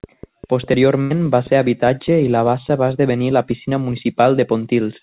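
A burst of packet loss runs from 1.02 to 1.12 s. Packets went missing, and the receiver stretched the last sound across about 82 ms, fading it out, before the speech picks up about 80 ms further on. The speech is band-limited to below 4 kHz, which fits a G.711 call codec.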